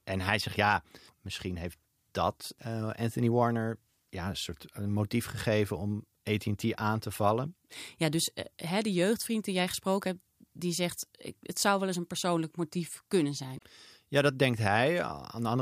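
Speech, with a brief glitch from 13.55 to 13.63 s, right after "een persoonlijk motief kunnen": damaged data in the compressed stream, which the decoder misreads before regaining frame sync.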